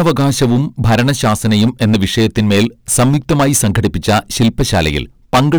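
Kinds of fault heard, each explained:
Hard clipping: The speech is driven about 18 dB past what the signal path can carry, so every peak is sliced off flat at the ceiling. About a tenth of the samples hit that limit. The squared-off tops create harmonics high up the spectrum. Because the overload is this large, the distortion is not confined to occasional crackles. Every loud syllable, from start to end, carries a harsh, buzzing fuzz.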